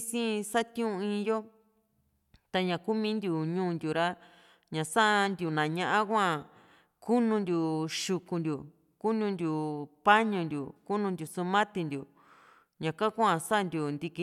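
No technical faults can be heard anywhere in this speech recording, with the signal holding steady and intact throughout.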